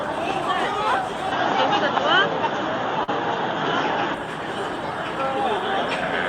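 Input switched to a poorer device, from 1.32 to 4.14 s: the sound abruptly loses everything above 6.9 kHz and turns duller, with a level shift of about 5 dB and a new noise floor sitting far below the signal, most likely because recording moved to a narrower-band microphone.

Short concealed packet loss at 3.03 to 3.10 s: about 40 ms of audio never arrived, and the decoder bridged the gap with 44 ms of synthesized continuation of the preceding sound, heard as a brief smear before blending back into the real signal.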